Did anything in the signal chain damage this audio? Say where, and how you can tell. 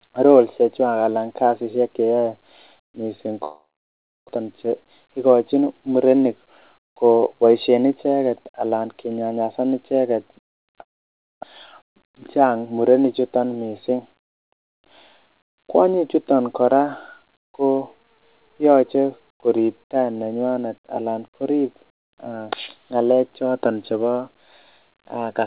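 Yes. A long network dropout occurs at 3.44 to 4.31 s and again at 10.81 to 11.45 s, just after "icheget alan kinyanyasan icheget". The sound fades to silence, then resumes with audio missing, likely from lost packets.

Jitter buffer speed-up runs from 4.38 to 7.91 s, ending before "icheget alan kinyanyasan icheget". The receiver cut pitch periods to remove about 200 ms, so speech runs 6% faster at the same pitch.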